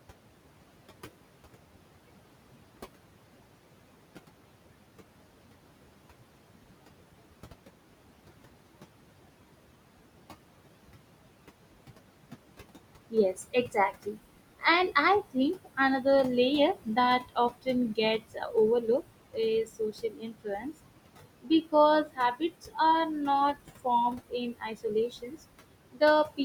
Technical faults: noise suppressor artifacts; speech cut by the noise suppressor

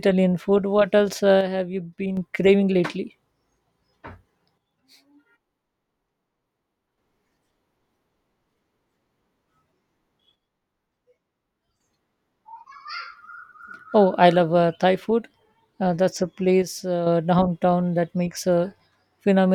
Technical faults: one channel drops out

